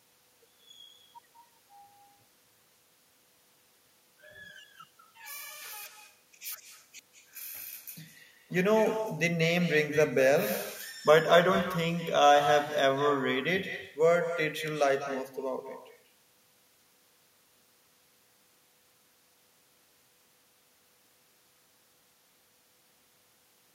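Speech runs throughout with echo and no canceller. Each phrase returns about a fifth of a second later, about 10 dB quieter and thinner, from a far-end loudspeaker reaching its microphone.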